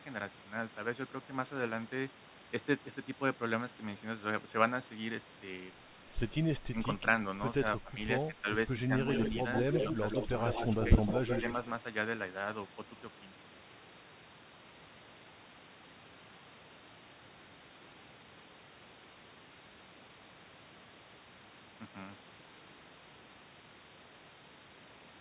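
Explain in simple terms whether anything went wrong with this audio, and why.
Speech suppressed in double talk: at 6.71 to 6.76, 7.81 to 7.96, 8.32 to 8.48 and 8.87 to 8.94 s, both people were likely talking at once, and the echo canceller turned the talker down along with the echo it was fighting. The voice briefly dips in level, each time for under a fifth of a second.

Echo leak: from 9.12 to 11.52 s, the other end's echo canceller likely failed to remove all the sound its microphone caught from a loudspeaker, and sent it back. A delayed copy of the voice trails about 145 ms behind the original, only a little quieter than the speech itself.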